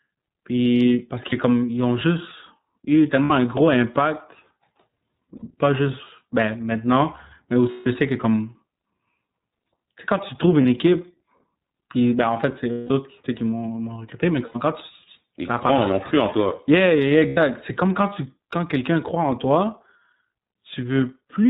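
The whole clip passes through the iLBC codec at about 13.3 kbps in 30 ms frames, so this speech loses everything above 4 kHz and takes on a plainly audible rough, slightly synthetic edge from frame-by-frame excitation coding. Lost iLBC frames then drop packets, and the decoder bridges each gap by repeating the last pitch cycle with added noise, heard as a brief held, buzzy vowel. The gaps fall at 1.29 s (30 ms, just before "comme ils ont"), 3.24 s (60 ms), 5.36 s (60 ms), 7.71 s (150 ms), 10.62 s (30 ms, after "sais quand tu trouves"), 12.72 s (180 ms, between "ben en fait c'est" and "autres qui qui m'ont"), 14.45 s (90 ms) and 17.28 s (90 ms). The lengths fit one to six 30 ms frames. The longer gaps audibly fade, and the voice returns almost immediately after each one.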